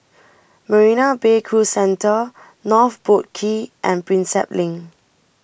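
Listening to this speech recording, nothing technically wrong stood out at any point.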